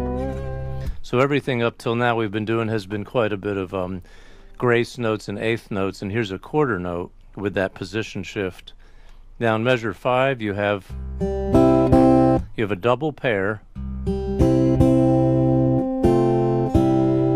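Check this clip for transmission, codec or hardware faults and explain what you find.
Nothing stood out on listening to this clip.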